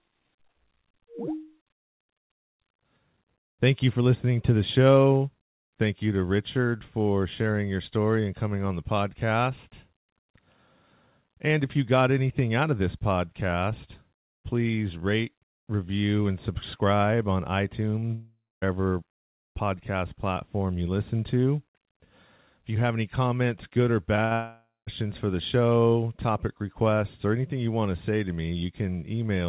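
At 18.00 to 18.04 there's a short concealed packet loss: about 20 ms never arrived and got patched over, so you hear a quick smear in the sound. Right after, from 18.14 to 18.64, comes what's likely a long network dropout. The last sound is stretched into a fading buzz or hiss, then there's about a quarter second of near-silence, and roughly half a second of audio is simply gone. After "any comments good or" the same thing builds up. First another brief concealed loss at 24.16 to 24.20, then a burst of packet loss at 24.26 to 24.33, about 60 ms lost and about 50 ms filled with the last sound held and sinking away. That runs straight into a second likely long network dropout from 24.33 to 24.89, where roughly half a second is lost, about 0.2 s of it silent, before the audio picks up again at "for the show topic". Throughout, the narrow telephone-style sound with nothing above 4 kHz fits the G.711 call path.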